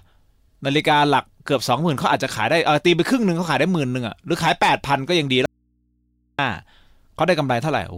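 A speech clip with an audio dropout to a faint residue from 5.46 to 6.39 s: the signal cuts out abruptly for about 930 ms, leaving only hum roughly 45 dB down, likely an open input after a connection break. The waveform flattens suddenly; a spectrogram shows low horizontal hum lines only.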